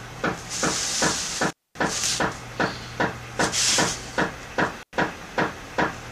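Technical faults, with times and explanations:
1.49 to 1.79 s and 4.82 to 4.94 s, intermittent contact: the signal cuts out twice, for about 0.22 s and then 0.10 s, as a loose plug or cable briefly loses connection. Each gap starts and ends with crackle where the contact scrapes open and shut, and faint hiss remains while the line is open. The rough edges and the hiss set it apart from a digital dropout, which falls to clean silence.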